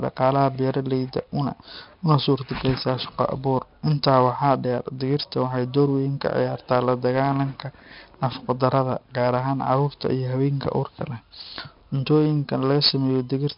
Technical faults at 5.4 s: 4-bit ADPCM compression

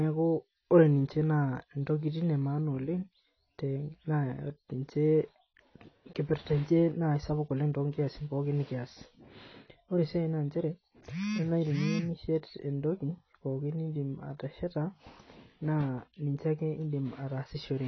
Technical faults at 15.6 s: AAC compression

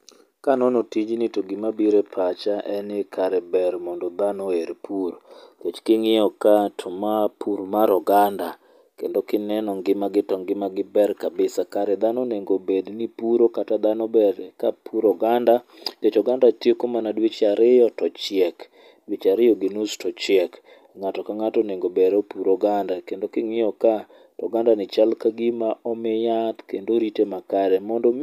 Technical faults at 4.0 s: none

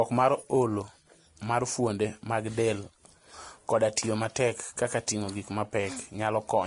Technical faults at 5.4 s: Vorbis compression

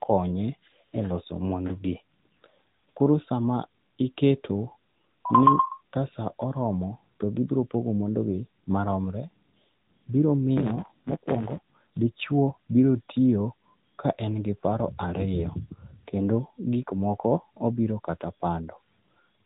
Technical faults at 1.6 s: AMR narrowband mobile codec

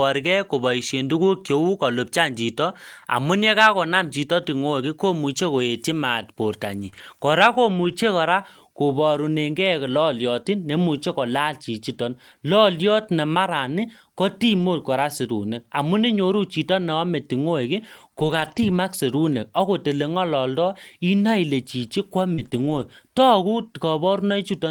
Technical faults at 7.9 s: lost packet rebuilt from error correction

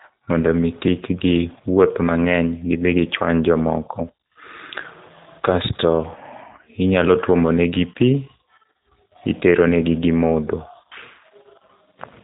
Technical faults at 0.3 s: G.729 codec

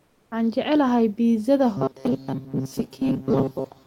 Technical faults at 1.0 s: none

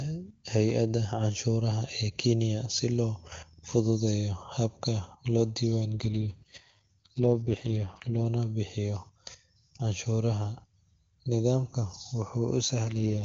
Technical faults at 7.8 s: AMR rate drop

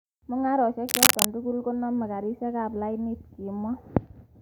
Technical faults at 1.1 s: cable scratch noise

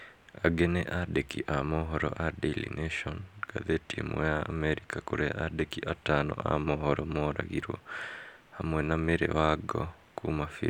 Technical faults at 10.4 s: none

